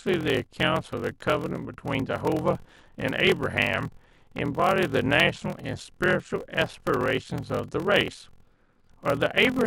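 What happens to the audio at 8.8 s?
A block size mismatch (padded) runs through the whole speech clip, so at 8.8 s it is still present. One stage hands over blocks shorter than the 1024 samples the next stage reads, and each block is topped up with zeros. That silent gap in every block produces a buzz at about 43 Hz, the block rate, which fits 1024-sample blocks at 44.1 kHz. The speech runs at about 0.86 times normal speed while keeping its timbre.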